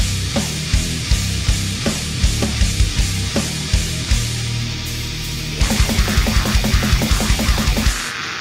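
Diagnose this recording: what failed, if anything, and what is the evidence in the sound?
Nothing failed; no fault is audible anywhere here.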